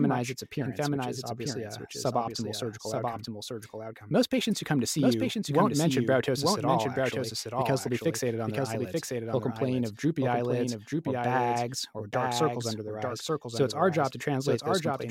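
From start to finish, the speech carries a doubled audio track: a second, full-band copy trails the original by about a second, a few decibels quieter. It most likely comes from the sound being captured again through a slower path and mixed back in. Unlike an echo or room reverb, the copy arrives once only, with no decaying tail and no room colour, so it sounds like a clean duplicate talking over the original.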